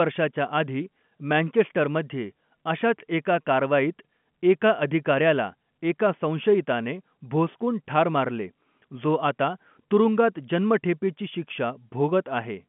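Nothing has gone wrong in this speech, which simply carries the familiar narrow telephone sound of G.711 coding, with the band sitting at roughly 150 Hz to 3.4 kHz and nothing coming through above about 3.7 kHz.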